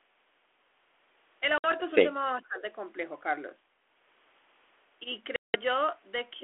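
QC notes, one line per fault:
1.58–1.73 s and 5.36–5.56 s, packet loss on an ADPCM call: two hard-edged silent holes, about 60 ms in the first and 180 ms in the second. The durations fit roughly three and ten lost packets. On resuming, the receiving decoder's adaptive predictor and step size no longer match the sender's. The speech comes back slightly distorted, and it takes a few tens of milliseconds to settle.
2.33–2.64 s, speech suppressed in double talk: for about 300 ms the speech level sinks, at its deepest about 15 dB. The likely cause is the far side talking at the same moment. The echo canceller could not separate the near talker from the loudspeaker echo and attenuated both, so the talker is ducked rather than cleanly passed.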